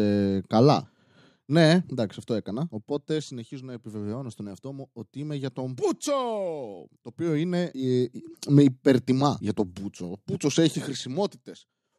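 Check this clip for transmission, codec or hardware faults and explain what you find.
Zipper noise appears three times in the speech: a fine ticking rides on the level as it falls about 10 dB from 2.04 to 2.93 s, just before "συνεχίζω να επιβεβαιώνω στον"; rises about 10 dB from 7.50 to 8.52 s, before "υπερτιμά για τον"; and falls again from 10.68 to 11.47 s. Each gain move is applied in coarse unsmoothed steps, around 40 a second, and every jump clicks.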